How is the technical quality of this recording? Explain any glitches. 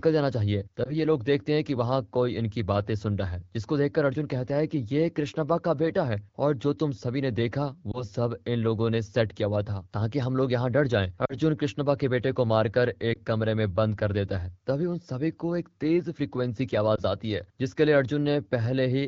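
The audio is AMR wideband (HD Voice) speech, with light codec colouring that fits a rate around 12.65 kbit/s. The real glitches are lost AMR speech frames at five points, at 0.84–0.96, 7.92–8.05, 11.25–11.35, 13.13–13.19 and 16.95–17.01 s. Radio errors broke each frame's checksum, so the decoder reused the last good pitch and vocal tract settings at falling gain. Each single-frame loss is a brief dip or warble, and the two-frame loss at 11.25 s is a touch longer.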